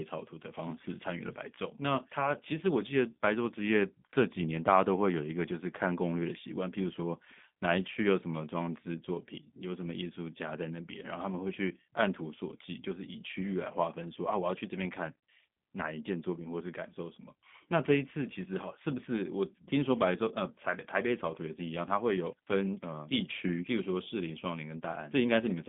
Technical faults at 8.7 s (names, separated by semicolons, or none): G.729 codec